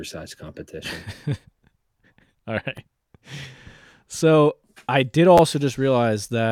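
At 2.77 s a repeated buffer occurs: fresh audio arrived late, so the same 10.67 ms slice, which fits a 512-sample buffer, plays once more. From 5.38 to 5.40 s the slice sounds twice extra. With pieces this short, each is heard as a click or brief buzz rather than a stutter. Unlike a dropout, nothing goes silent and no speech is lost. The sound is duplicated, with a hard join at each repeat.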